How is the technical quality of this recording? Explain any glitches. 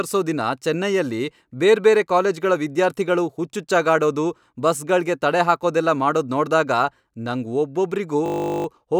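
There's one glitch, near the end of the speech. From 8.26 to 8.66 s you get a system hang loop: the machine stalled while the sound hardware kept replaying the same 20 ms chunk, about 20 times over, so it comes out as a steady 50 Hz buzz. Practically no audio seems lost around it.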